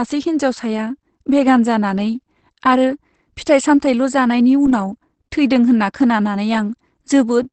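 A speech clip that was likely run through Opus compression in its speech mode at a low bitrate, fitting roughly 16 kbps wideband, throughout. Nothing survives above 8.6 kHz, leaving it plainly muffled and hoarse.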